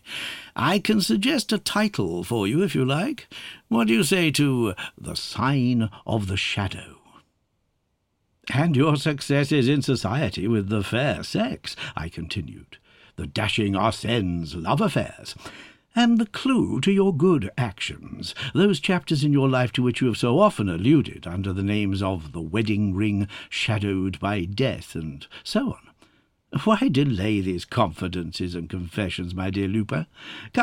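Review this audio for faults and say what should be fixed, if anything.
From 5.18 s to the end of the clip the sound turns dull and muffled. This is de-emphasis applied wrongly: a treble-cut curve meant to undo pre-emphasis was applied to audio that had none, or was applied twice, so the top end rolls away smoothly, about 11 dB lower at 10 kHz than at 1 kHz. On a spectrogram the upper bands visibly dim from 5.18 s onward with no sharp cutoff edge, and the waveform looks slightly rounder, with softened transients. Prevent it by applying de-emphasis only when the source is confirmed to carry matching pre-emphasis, and never applying it twice in the chain.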